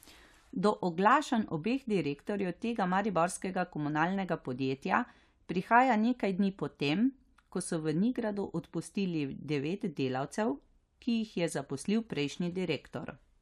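No technical faults are audible anywhere in the speech recording.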